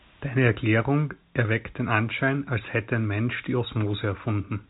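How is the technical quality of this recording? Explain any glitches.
The technical quality shows no glitches to explain, with the speech carried as telephone-band audio that stops at about 3.8 kHz.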